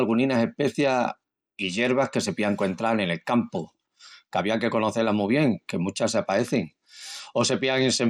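Speech with two Bluetooth SBC bit pool drops, from 0.79 to 2.20 s (ending just before "se pían encuentral en") and from 6.06 s to the end (starting after "mu bien que"). Treble dulls and a gritty noise rises, which fits the link cutting the bit pool from 28 to 11, near 90 kbps. On a spectrogram the upper bands thin or vanish while a grainy noise floor fills the rest.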